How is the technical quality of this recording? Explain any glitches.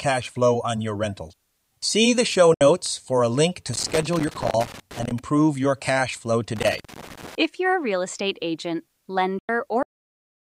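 The recording has several technical faults: two brief dropouts, two stretches of crackle, and an abrupt ending.

Digital broadcast dropout, at 2.54 to 2.61 s and 9.39 to 9.49 s. The receiver lost valid frames and muted until good data returned. After "the show" about 64 ms vanishes behind a 3 ms fade, and later about 96 ms disappears. These gaps fit two and three lost frames.

Loose connector crackle, from 3.73 to 5.19 s and from 6.56 to 7.35 s. A worn or dirty contact kept making and breaking, chopping the signal into an irregular scratchy burst. The first runs from just after "for a link to" until "your cash flow", and the second begins just after "your cash flow".

Cut-off end, at 9.83 s. The final buffers were never written, so the speech stops mid-sound and drops straight to digital silence with no natural decay. The remaining stretch to the end of the file is empty.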